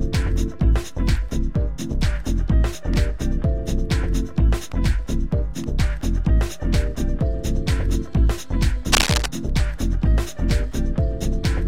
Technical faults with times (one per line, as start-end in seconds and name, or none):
8.92-9.26 cable scratch noise